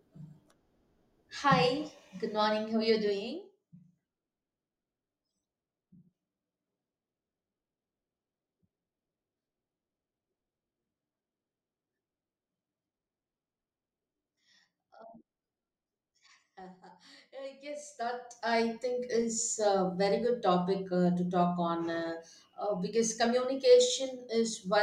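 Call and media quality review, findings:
Zipper noise, 3.09–3.60 s, just after "are you": ticking rides the speech during a fast drop of roughly 20 dB in 1 dB steps, about 40 per second. Probable component: gain stage applying unramped steps.

Zipper noise, 17.56–18.74 s, ending before "think is a very": slower ticking, about 15 per second, during a rise of roughly 20 dB, again 1 dB steps. Each step is a tiny waveform discontinuity. Ticks appear only while gain moves and their rate follows the step rate.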